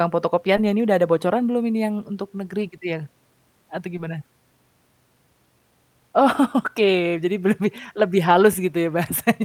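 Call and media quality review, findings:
Brief smears at 0.56–0.58 s (before "yang ini udah ada"), 2.37–2.39 s (after "belum ini yang untuk"), 3.97–3.99 s and 8.33–8.35 s (after "jadi be lebih lebih"). Short concealed packet loss: the receiver's decoder extended prior audio 10 ms, 10 ms dropped.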